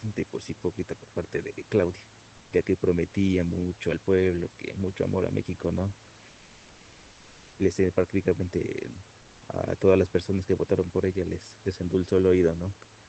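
At 2.37 to 2.51 s and 6.29 to 7.57 s, comfort noise replaces the background. The room hiss turns flat and featureless, likely from Opus discontinuous transmission.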